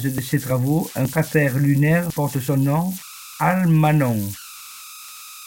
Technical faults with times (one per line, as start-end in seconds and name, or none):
0.00-5.46 converter idle tones